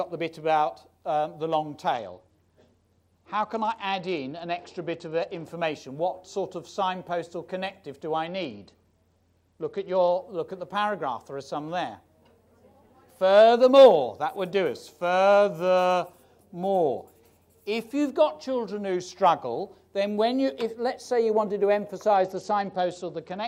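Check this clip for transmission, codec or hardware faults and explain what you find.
A Bluetooth SBC bit pool drop occurs three times, at 1.9–5.4 s, 8.3–10.1 s and 22.2 s to the end. The link starves the encoder, and the sound suggests a bit pool near 11 rather than 31, around 83 kbps. High sub-bands lose their bits, dulling the treble under a gritty quantisation noise.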